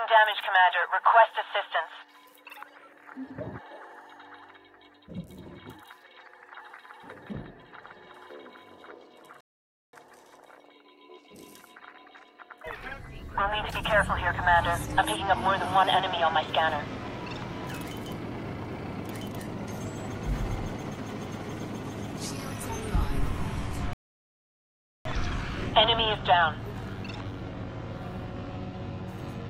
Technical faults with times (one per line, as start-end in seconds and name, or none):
9.41-9.93 rebuffering stall
23.93-25.05 rebuffering stall